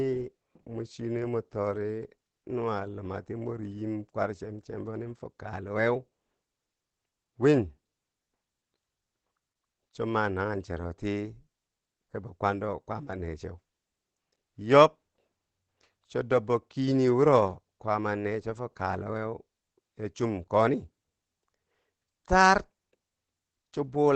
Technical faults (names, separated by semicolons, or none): Opus compression